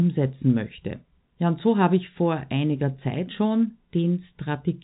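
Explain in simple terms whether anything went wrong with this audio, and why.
Listening to this speech recording, nothing stood out as having gone wrong; it has the somewhat narrow, muffled-at-the-top sound of an ordinary phone line, which is simply how telephone audio normally sounds.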